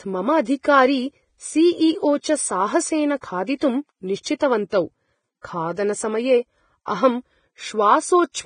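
From start to finish, the speech carries heavy damage from lossy compression, most likely Vorbis compression at a low setting. Nothing is left above 9.7 kHz, so the top end is cut away. The treble that remains is quantised very coarsely. Fine detail is replaced by noise of similar energy. The result is a hissy, grainy layer over the voice. Tones sound rough, and attacks are smeared. The degree of damage fits a bitrate near 22 kbps.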